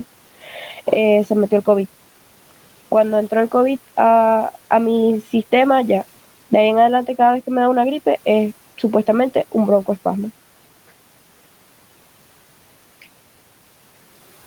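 A short speech recording where the noise suppressor bites into the speech right at the start: from 0.44 to 0.54 s, roughly a tenth of a second, the suppressor mistakes speech for noise and pulls it down by as much as about 7 dB, so that bit sounds swallowed and faint. The room noise, sitting about 26 dB under the speech, is part of the recording itself.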